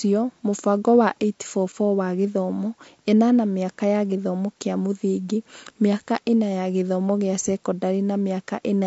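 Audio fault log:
Throughout, low-delay AAC compression: the voice sounds plainly rough and grainy, with a hiss-like fill between the pitch harmonics and a top band that seems lowered or synthetic. The likely cause is AAC-ELD coding at a rate that fits about 32 kbps, whose short frames of about 10 ms code only about 500 frequency lines. Ordinary long-frame AAC at a similar rate keeps harmonics cleaner and smears attacks instead, so the graininess points to the low-delay variant.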